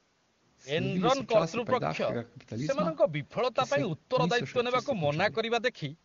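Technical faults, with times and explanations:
No technical faults can be heard in this speech.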